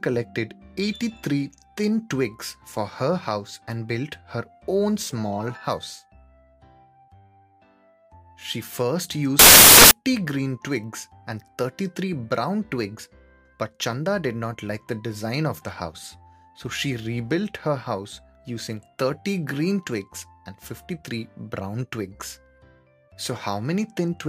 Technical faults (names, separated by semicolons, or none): samples built from the wrong bytes